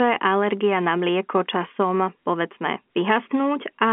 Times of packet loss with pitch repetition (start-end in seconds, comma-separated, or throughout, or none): 1.68-1.70